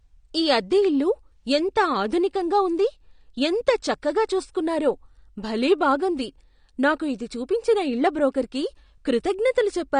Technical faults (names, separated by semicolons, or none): AAC compression